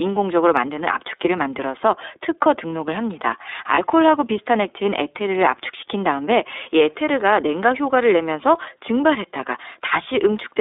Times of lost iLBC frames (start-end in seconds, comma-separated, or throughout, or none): 3.74-3.79